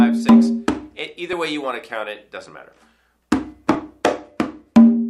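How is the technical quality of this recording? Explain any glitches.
Two brief glitches, at 1.33 s and 2.49 s, each a small forward jump in the sound and no gap of silence. Both are likely a dropped buffer (overrun): the software failed to read a block of samples before the hardware overwrote it, so a few milliseconds of audio vanished and the material on either side was spliced directly together. The missing sliver makes the sound skip slightly ahead.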